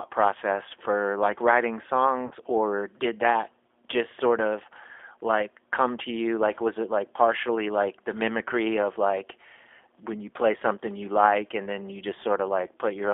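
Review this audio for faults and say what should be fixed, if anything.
The whole call ran through the G.729 codec at 8 kbit/s, rebuilding speech from a filter, pitch predictor and sparse pulses on a 300 Hz to 3.5 kHz line, so the speech sounds band-limited, rough and plainly synthetic throughout. Using a wideband codec such as G.722 or Opus would prevent it.

At 2.27 s, about 40 ms of audio was lost, which fits two 20 ms packets, and the codec's packet loss concealment extrapolated from the last frame at falling gain. The speech smears into a buzzy tone or coloured noise that fades until about 2.35 s. Adding jitter buffering or forward error correction on the network path would prevent it.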